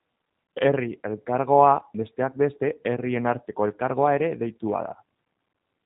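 From start to finish the speech has passed through the G.729 codec, most likely its G.729A form. The encoder discards the waveform and keeps only a vocal tract filter, a pitch predictor and a few pulses per frame, at a rate that fits 8 kbit/s. Nothing above 3.8 kHz survives, so sibilants are dull and the band is narrow, and the damage is plainly audible: the speech sounds rough and faintly synthetic.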